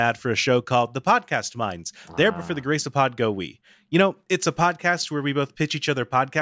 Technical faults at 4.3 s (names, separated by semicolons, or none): none